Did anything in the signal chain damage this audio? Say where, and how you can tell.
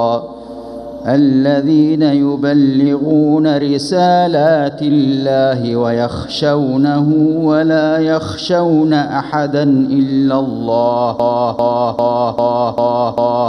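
Yes. From 11.20 s to the end, a 0.40 s fragment repeats six times back to back: a broken-record loop, likely from a stalled player or stream buffer resending its last block. A spectrogram shows identical 0.40 s tiles, and the intended audio is lost.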